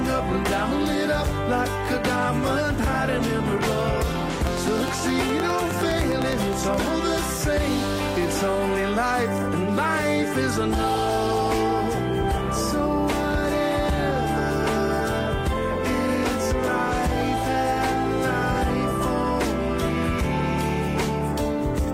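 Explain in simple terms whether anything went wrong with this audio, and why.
Yes, something went wrong: likely electrical interference or a faulty connection fired a train of clicks into the recording. From 4.47 to 6.75 s you hear a steady ticking of about ten sharp, near-identical clicks per second, around twenty in all, sitting loudly on top of the sound.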